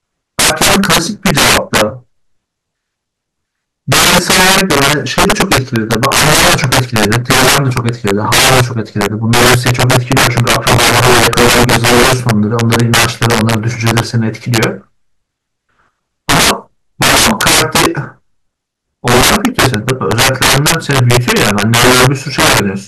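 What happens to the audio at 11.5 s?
Integer overflow is what you hear at 11.5 s, and it is present throughout the speech, not just at that moment. The signal is driven about 15 dB past full scale, and instead of being held at the ceiling, every sample that exceeds the integer limit wraps around to the opposite extreme. Something like 7 percent of samples land over the limit, so the louder syllables break into harsh, violent cracks far sharper than ordinary clipping.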